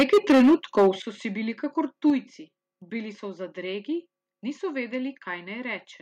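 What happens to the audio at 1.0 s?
At 1.02 s the speech drops abruptly in level by about 10 dB, with voice and background falling together, just before "so si bili kakor". This is a microphone volume stepped down event, likely the call software cutting the device's input gain in one move after judging it too hot. On a waveform the envelope shrinks at a single point; on a spectrogram every band dims at once along a sharp vertical boundary.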